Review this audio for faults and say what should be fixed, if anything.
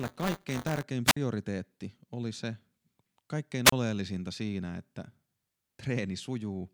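Buffer tearing runs from 0.00 to 0.83 s as a robotic buzz at 200 Hz, tied to the speech. The writing program and the playback hardware have drifted so that they meet inside every period. That means each roughly 5 ms block carries a small slice of audio from about 20 ms earlier, spliced in with hard edges on both sides. The buzz rate fits a 5 ms period, and the age of the stale audio fits a ring of about four periods. To prevent it, keep the writer a safe margin ahead of the read pointer and re-synchronise the stream after an underrun.

Wireless microphone squelch dropout occurs twice: 1.05 to 1.17 s, with a mute of about 55 ms, and 3.65 to 3.73 s, with a mute of about 31 ms. In each, hiss swells briefly as the FM radio link fades. The receiver's squelch then cuts the output to near silence until the signal recovers and the speech comes back. To prevent it, improve the radio path with better antenna placement, a shorter range, or a diversity receiver.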